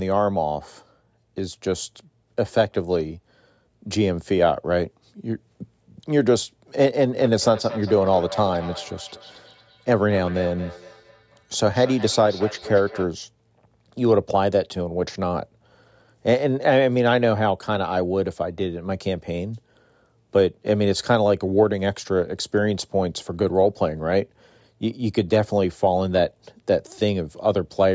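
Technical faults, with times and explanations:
7.18–13.17 s, feedback echo between two devices: the speech comes back roughly every fifth of a second, at most about 15 dB below the direct sound. A second device in the room replays the call, and this microphone picks that playback up again, which its own echo canceller cannot remove.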